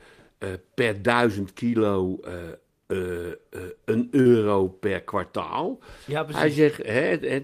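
At 4.21 to 4.27 s there is a short concealed packet loss: about 40 ms of the speech stream arrived too late for the decoder. The receiver synthesised roughly 39 ms by extending the preceding sound, then crossfaded back, leaving a brief smeared wobble in the voice.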